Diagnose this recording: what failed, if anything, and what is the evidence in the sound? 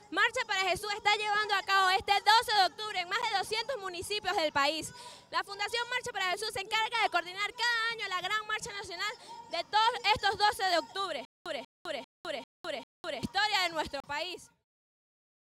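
The buffer or driver stage most likely failed to deliver samples in time, so the output was filled with zeros, leaving blocks of digital silence. At 3.22 s a hole of about 11.6 ms appears, which fits a 512-sample buffer going unfilled. A longer one runs from 14.00 to 14.04 s, about 35 ms. The signal drops straight to silence and returns with no fade. The first sounds like a tick, the second like a brief hole.

From 11.25 to 13.23 s there is a stutter with silent gaps, most likely a playback or streaming stall. The same 190 ms fragment plays five times, with about 206 ms of digital silence after each, giving an even rhythm of roughly 396 ms. Each time the player retries, it replays the last buffered piece and then runs dry. The audio that should have filled those two seconds never arrives and is lost.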